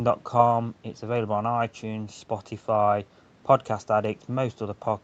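Nothing stood out on listening to this speech clip.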